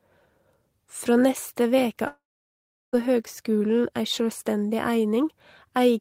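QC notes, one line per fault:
2.07–2.95 s, long network dropout: right after "neste veke" the sound smears into a short buzzy carry-on of the last bit, which fades out within about a tenth of a second and leaves close to 0.73 s of near-silence. Speech then picks up again further along, with about 0.86 s simply gone. That pattern likely comes from a stretch of audio that never arrived, with the receiver stretching the last sound it had before giving up.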